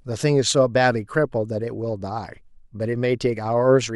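Nothing goes wrong anywhere in this bit of speech; there's no technical fault to point to.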